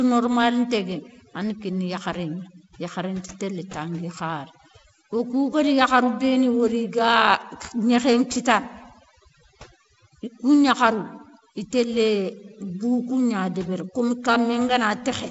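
Speech clip with overdone noise removal throughout. The suppressor clamps individual frequency bands whenever they sit near its noise estimate. The background drops and breaks up into twinkling specks, and quieter parts of the voice are stripped away. Its band limit just under 7.7 kHz fits G.722 wideband telephone coding, probably at 48 kbit/s, with light coding damage.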